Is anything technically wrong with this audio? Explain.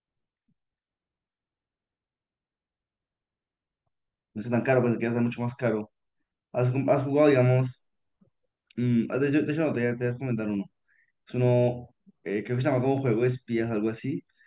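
No, nothing in this speech recording registers as a technical fault on listening.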